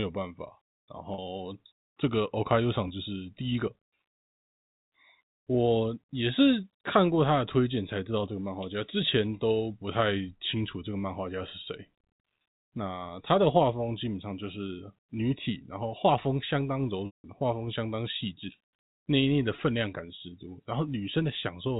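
Speech over telephone-band G.711 coding, cut off above 4 kHz, suffers packet loss with pitch repetition at 1.14–1.18 s, 2.88–2.90 s, 17.06–17.24 s and 19.56–19.58 s. The short gaps sound like brief buzzy holds, fitting one or two lost 20 ms packets. The 180 ms loss fades toward silence. A spectrogram shows smeared, repeated harmonic stripes fading before speech resumes.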